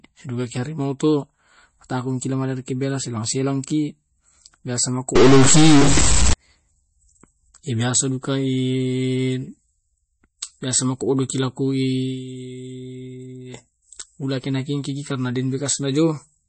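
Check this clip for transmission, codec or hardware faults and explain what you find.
Two faults are audible: compression damage throughout and a burst of digital corruption in the middle.

Throughout, the speech sounds watery and dull, with nothing above 8.3 kHz. This is likely MP3 compression at around 32 kbps: the encoder cuts the treble and drops weak frequency lines.

From 5.16 to 6.33 s the sound is corrupted, with noise filling the gaps. A likely stuck bit is forcing one data bit to a fixed value, throwing about half the samples off by that bit's weight.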